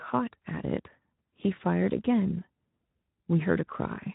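From start to finish the speech sounds grainy and hoarse, with a rough texture riding on every syllable and a noisy haze where the voice should be clean. This is plainly audible Speex codec damage. Speex models speech with a predictive filter plus an excitation signal, and at a middling setting, which fits a rate of around 11 kbps, too few bits go to that excitation, so its noise-like coarseness replaces the natural detail of the voice.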